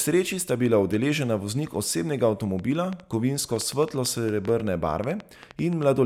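It's a speech clip with a train of clicks from 2.59 to 5.84 s, right after "bila udeležena voznik osebnega". There are about twenty similar pops at an irregular 6.5 per second, peaking about 5 dB above the speech. It's likely interference or a faulty connection or power supply.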